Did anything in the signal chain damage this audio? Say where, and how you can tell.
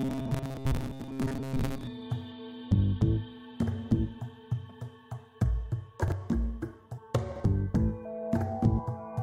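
Yes. The first stage to fail is the driver or buffer. From 0.01 to 1.87 s the audio turns into a rigid, metallic buzz at 134 Hz, with most of that stretch repeated rather than fresh. This is robotic sound from repeated short buffers, likely caused by buffers arriving too seldom so that the last slice was looped in their place. A 134 Hz buzz fits a loop of about 7.5 ms, and its repetition rate imposes that fixed pitch.

Chunks out of order appear at 1.0 to 1.08 s, 6.04 to 6.12 s and 7.32 to 7.4 s. Each span is two 40 ms chunks with the earlier one played second, one chunk late, which points to a buffering or network reassembly stage. No audio is lost, but each swap creates three hard joins, so these moments sound jumbled instead of simply interrupted.

Compressed frames skipped at 6.97 s and 8.78 s point to the codec or stored file. Each time, roughly three frames of 23.2 ms go missing, about 70 ms of audio, so the sound jumps forward.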